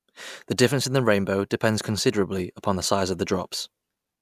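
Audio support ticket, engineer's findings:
No faults found on listening; speech signal nominal throughout, no action required.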